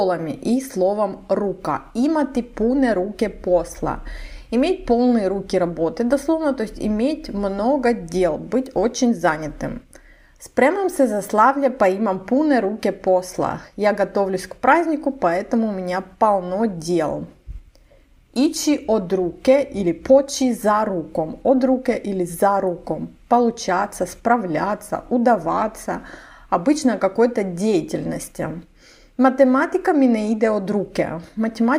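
No technical faults can be heard anywhere in the recording.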